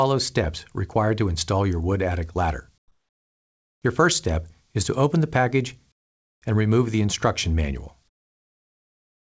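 From 2.78 to 3.82 s, 5.92 to 6.42 s and 8.08 s to the end, the background becomes comfort noise: steady, featureless hiss about 15, 16 and 22 dB quieter, likely from discontinuous transmission. It never drops to true silence, which sets it apart from a dropout.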